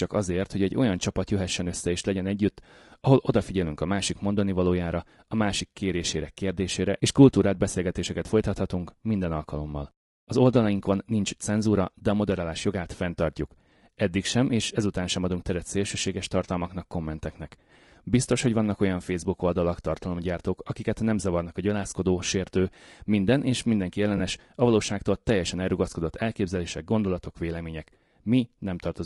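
Speech runs through with a rough, grainy texture, noise filling the gaps between harmonics and a thin, synthetic-sounding top band. This plainly audible damage is likely low-delay AAC compression (AAC-ELD) at a rate fitting around 32 kbps. From 24.17 to 24.20 s there is a brief smeared, noisy or phasey patch consistent with one lost 20 ms frame and AAC frame loss with concealment. The gap is filled with reconstructed spectrum instead of dropping to silence or clicking as a plain dropout would, and it is too short to fade.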